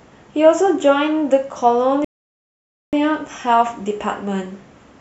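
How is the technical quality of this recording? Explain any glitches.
The recording has one glitch: a rebuffering stall from 2.05 to 2.93 s. The speech cuts abruptly to silence and then picks up exactly where it broke off, with nothing skipped or repeated. The player exhausted its downloaded audio and paused playback until more data arrived, so the gap is inserted rather than replacing content. It adds about 0.88 s to the running time and is heard as an unnatural dead pause mid-speech.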